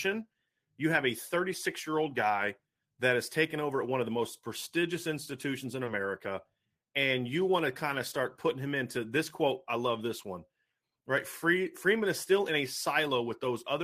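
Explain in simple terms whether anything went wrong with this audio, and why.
There's one small glitch, a short concealed packet loss, at about 5.85 to 5.89 s, right after "most prestigious institutions in". A tiny slice of the call, about 20 ms, didn't arrive in time. The receiver covered the gap by stretching out the sound just before it, then eased back into the real audio. You hear a quick smear or wobble there, and a brief sound at that spot can go missing.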